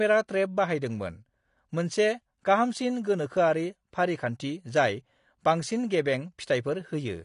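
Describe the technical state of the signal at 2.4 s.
AAC compression is audible at 2.4 s, as it is throughout the clip. Nothing is present above about 10.5 kHz, and the speech sounds dull and smeared, with a warbling, fizzy edge on sibilants and held sounds. This is likely AAC-LC coding at a low rate, around 32 kbps. The encoder lowers its cut-off and quantises each block of frequency lines coarsely, so detail drops out and the remaining bands waver from frame to frame.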